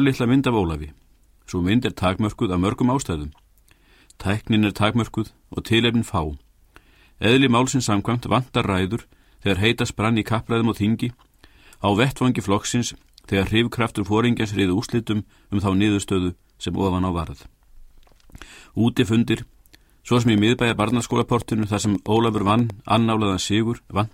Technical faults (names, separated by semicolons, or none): train of clicks